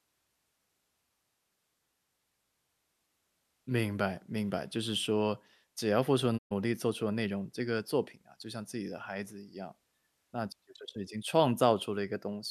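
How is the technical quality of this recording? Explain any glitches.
The recording has one glitch, a digital broadcast dropout from 6.37 to 6.53 s. The receiver stopped decoding valid frames and muted until good ones returned. The speech fades out over 20 ms, leaving a 120 ms silent hole, consistent with a few lost frames, before the sound resumes.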